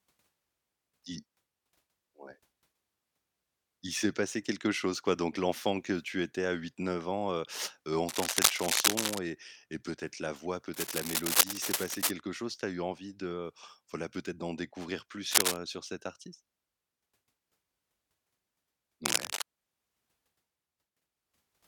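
Four stretches of cable scratch noise cut across the speech, at 8.07–9.19 s, 10.74–12.12 s, 15.31–15.60 s and 19.05–19.42 s. Each is a dense, ragged burst of scratching and rustling. The first three sit a little above the speech and the last is about level with it. The likely cause is a worn cable or connector being moved, with its contact resistance jumping about. The uneven bursts cluster into patches and then stop, unlike the scattered, isolated ticks of crackle.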